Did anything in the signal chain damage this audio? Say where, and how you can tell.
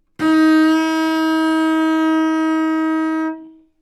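Yes. The damage sits at the network stage, where clock drift between sender and receiver disturbs the sound. The sender's clock runs roughly 4 percent slower than the receiver's, so packets arrive a little too slowly and the jitter buffer keeps draining. On a waveform this shows as small seams where a short piece recurs, and on a spectrogram as thin vertical discontinuities scattered unevenly across the clip rather than at a regular rate.

The repeated timing corrections run from 0.10 s to 3.72 s. To avoid running dry, the receiver keeps repeating short pieces, always stretching and never cutting, which adds on the order of 150 ms and leaves the sound playing at about 97 percent speed. Each edit is tiny, heard if at all as a slight hiccup or uneven pacing. Comparing the two waveforms shows the copy falling steadily behind, and the spectrogram shows duplicated slivers at irregular gaps.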